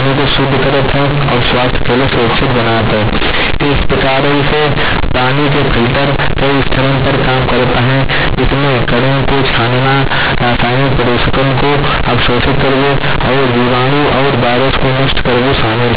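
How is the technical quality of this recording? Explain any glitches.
The technical quality is poor: the whole recording is badly distorted. The cause is companded audio read as linear. The speech was encoded as A-law telephone data, and the playback side took those bytes as plain linear 8-bit samples without expanding them. Because A-law packs sign and a logarithmic level into each byte, every sign change throws the output across roughly half its range. Quiet passages come out as large as loud ones, so from start to finish the speech sounds harsh, very loud and buzzy, with heavy noise filling the pauses. The underlying G.711 coding itself, at 8,000 samples per second, limits the audio to below 4 kHz, but that narrow telephone band is normal for the format and is not part of the fault.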